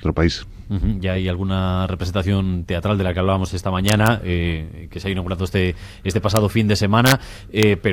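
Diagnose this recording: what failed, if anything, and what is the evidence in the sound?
Integer overflow in a fixed-point gain or mixing stage, most plausibly during sample-format conversion, produces violent cracks at 3.89 to 4.07 s, at 6.37 s, at 7.06 to 7.12 s and at 7.63 s. The peaks barely exceed full scale, by about 1 dB, 0 dB and 2 dB, yet each excess wraps to the opposite extreme of the range. Clipping would instead flatten those peaks with a duller edge, so even these small overshoots sound far harsher than clipping would.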